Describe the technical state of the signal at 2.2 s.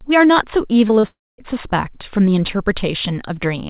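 At 2.2 s the speech is intact, with no dropout, glitch or distortion, and it carries the narrowband sound of the call path, with nothing above 4 kHz, which fits a G.711 telephone codec.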